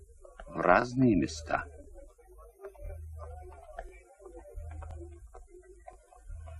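The audio was handled in one-second chunks that overlap, each starting about 23 ms before the previous one finished. That sliver plays twice at every join, giving a regular click or stutter at 0.82–0.84, 1.84–1.86, 2.86–2.89, 3.89–3.91, 4.91–4.93 and 5.93–5.96 s.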